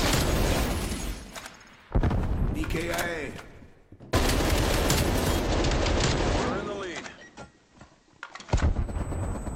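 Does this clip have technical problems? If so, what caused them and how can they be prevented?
Yes. From 5.36 to 8.9 s there is digital radio blending to analogue. The receiver lost its digital signal, cross-faded over 145 ms to the station's FM broadcast, then returned. A spectrogram shows a raised broadband hiss floor roughly 40 dB below the signal. The waveform level stays unchanged. A better antenna or a wired stream source would keep the digital signal locked.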